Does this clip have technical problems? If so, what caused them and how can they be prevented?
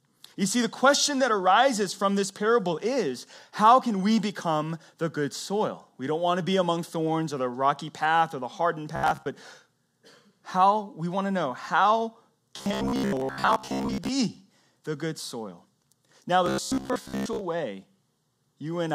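Yes. The speech turns into a rigid, metallic buzz locked near 66.7 Hz from 8.96 to 9.26 s after "path or the hardened", from 12.57 to 14.08 s after "want to know how", and from 16.46 to 17.41 s. This is robotic sound from repeated short buffers, likely caused by late-arriving audio: a chunk of about 15 ms was replayed through most of each stretch while new audio was skipped. A larger jitter buffer or steadier processing and network delivery would prevent it.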